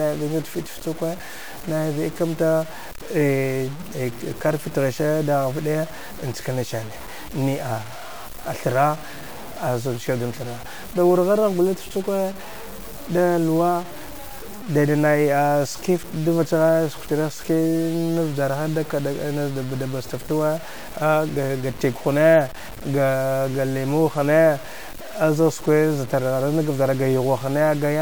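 From start to finish the speech carries a grainy, rasping distortion that tracks the signal, thickening on quiet syllables and decaying tails, where low-level detail breaks into sputter or drops out to silence. The error sits roughly 20 dB below the speech. This is low bit depth without dither, likely from truncation to very few bits, consistent with around 6 bits. Because no dither was applied, the error stays correlated with the signal rather than forming a steady noise floor.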